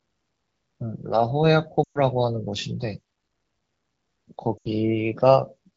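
At 1.84 s the speech drops to near silence for about 0.16 s, and again at 4.57 s for about 0.11 s. These are lost AMR speech frames. The wideband decoder repeated its last good settings with falling gain, so the sound dies within two frames and returns briefly rough.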